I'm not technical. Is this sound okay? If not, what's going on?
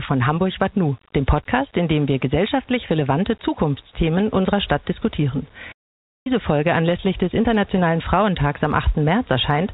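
No. At 5.71 s the sound cuts out and stays silent until 6.27 s, about half a second, then carries on. This is a playback stall, likely the player running short of data or being held up briefly.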